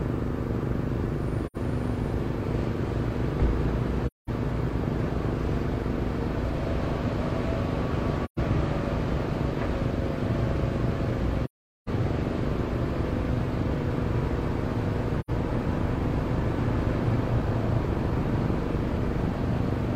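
Soft-edged holes open in the audio at 1.46, 4.06, 8.24, 11.44 and 15.20 s, lasting from 0.09 s to 0.43 s. This is AAC frame loss with muting: the decoder zeroed the missing frames, so overlapping windows fade the sound out and back in.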